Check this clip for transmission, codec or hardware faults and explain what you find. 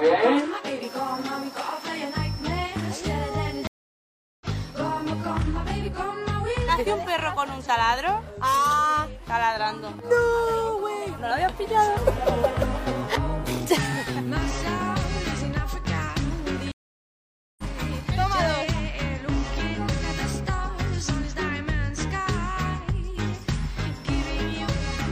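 Two stream reconnects break this clip, at 3.67 to 4.46 s and 16.72 to 17.64 s. Each time the connection dropped, the player fell silent for about 0.74 s and then 0.87 s, reconnected, and restarted decoding mid-stream. The sound resumes roughly half a second and then about 0.7 s further on, so material is skipped. That forward jump is what distinguishes it from a brief dropout, which would pick up where it stopped.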